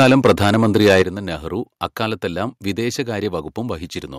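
From the very start until 1.02 s the speech shows microphone overload: the loudest syllables carry a harsh, crackling edge because their peaks run about 9 dB past what the converter can represent. The likely cause is input volume set far too high. A few percent of samples sit pinned at the converter's limit. On the waveform this appears as flat-topped plateaus at both rails, and the spectrogram shows broadband smearing above the speech harmonics wherever the tops are sliced off.

Two sudden drops follow, where the microphone volume is stepped down, most likely by call software reacting to the overload. At 0.03 s the whole signal, voice and background together, falls by about 3 dB, too little to stop the clipping. At 1.02 s a much larger cut of about 8 dB ends the distortion. Each step appears as an abrupt shrink in waveform height, and the spectrogram shows a uniform darkening across all frequencies from that instant.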